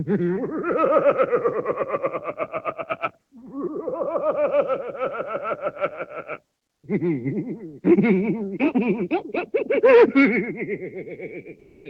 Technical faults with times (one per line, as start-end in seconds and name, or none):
11.59-11.85 comfort noise in place of the background